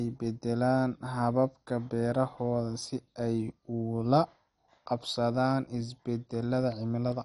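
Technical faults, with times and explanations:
Throughout: MP2 compression. The speech sounds dull, with nothing above 11.3 kHz, and carries plainly audible gurgling, granular distortion as upper sub-bands drop in and out and the remaining bands are coarsely quantised, likely from MPEG Layer II coding at a rate fitting about 48 kbps.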